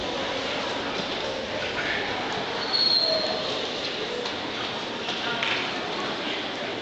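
Nothing technically wrong can be heard in this audio. No fault turns up anywhere in it, so there are no times or causes to report.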